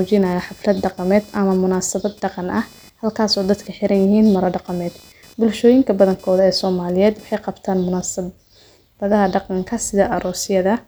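From the start to 7.62 s, a faint buzzing chirp with a pulse of around 500 Hz, some 30 dB below the speech, rises and falls independently of it and stops just before "munaasabhadaha dhaqanka". This is computer activity noise: processor or graphics load shifts the shared ground.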